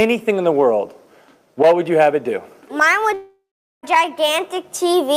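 A single fault runs from 3.13 s to 3.85 s, most likely a long network dropout. The last sound before the gap carries on as a buzzy, hissing continuation that fades away, and for roughly the final 0.42 s only silence or a low steady noise remains. When the audio resumes, about 0.7 s of material is simply gone. That fading tail followed by silence, with content skipped on return, separates it from a brief packet glitch or an outright hard mute.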